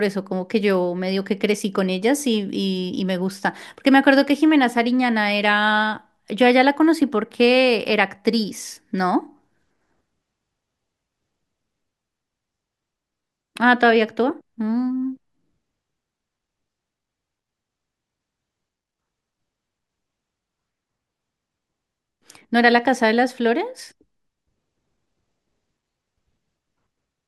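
Speech with no audible faults.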